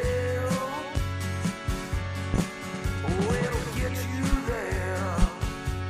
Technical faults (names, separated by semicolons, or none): loud pop